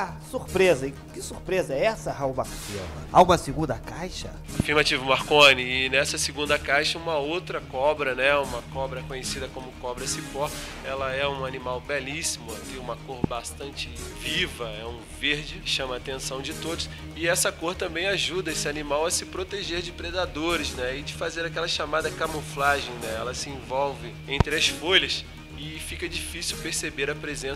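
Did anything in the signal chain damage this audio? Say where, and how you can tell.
Yes. Three loud pops sit on top of the audio, at 4.60 s, 13.24 s and 24.40 s, each about 23 ms long and a single sharp hit, peaking roughly 20 dB above the surrounding signal, with the last nearer 25 dB. The audio carries on unbroken beneath each one. The stage is likely the analogue wiring: a brief voltage step from a plug, switch or static discharge gets added to the signal, and the downstream circuitry shapes it into a thump.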